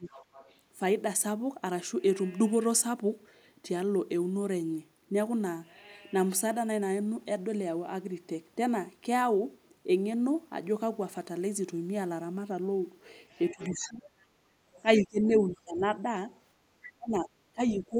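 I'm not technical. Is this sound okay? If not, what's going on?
No. This is speech from a call, and two related problems show up.

The first is speech suppressed in double talk. Both people were probably talking at once, and the call's echo-cancelling system couldn't tell this talker's voice from the other person's voice coming out of the loudspeaker, so it turned everything down. You hear the voice dip sharply or drop out in pieces: very briefly at the start (0.0 to 0.1 s), then from 13.51 to 14.06 s, 14.97 to 16.15 s, and from 16.98 s to the end.

The second is the other side's voice leaking through. The same echo-cancelling system likely failed to fully remove the far person's voice, which the talker's device was playing aloud and the microphone picked up again. A faint second voice comes through in short scraps, quiet compared with the main speaker: 0.1 to 0.59 s, 14.76 to 15.04 s, 16.32 to 16.89 s, and 17.69 to 17.82 s.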